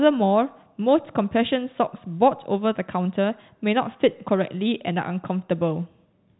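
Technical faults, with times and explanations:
No faults turn up here; the speech just carries the usual G.711 telephone coding, with nothing above 3.9 kHz, which is simply how that phone format works.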